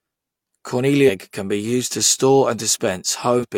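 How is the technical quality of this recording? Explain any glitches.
The speech has two dropouts where compressed frames were skipped. At 1.05 to 1.10 s, just before "can be used to", and again at 3.39 to 3.45 s, the speech lurches forward. Around 300 ms of audio goes missing each time, which fits about seven 42.7 ms frames. These frames were lost from the file or rejected as damaged by the decoder.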